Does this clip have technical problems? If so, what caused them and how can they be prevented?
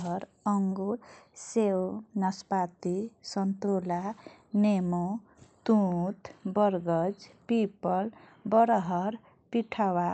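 Yes. From 0.72 to 1.90 s the speech suddenly runs about 5.4 percent fast, and its pitch rises by 91 cents, close to a semitone. It then snaps back to normal. Speed and pitch move together, which points to a drift correction step. The likely cause is clock-matching software abruptly changing the playback rate to drain or refill its buffer. The call codec path's treble cut near 8 kHz is normal. Prevent this by correcting drift gradually with small, continuous rate adjustments.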